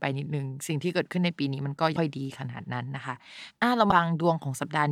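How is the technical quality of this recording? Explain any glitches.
The speech recording has two brief glitches, both caused by damaged data in a compressed stream, at about 1.95 s and 3.90 s. Each lasts about 14 milliseconds and sounds like a chirp or blip. Corrupted bytes in the encoded stream make the decoder misread those frames and lose sync until it finds a valid frame header. On a spectrogram each shows as a thin vertical streak of broadband energy, and on the waveform as a short, abrupt discontinuity.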